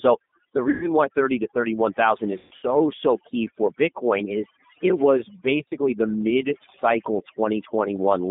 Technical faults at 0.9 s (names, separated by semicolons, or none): overdone noise removal; G.729 codec; VoIP packet loss concealed by the speech codec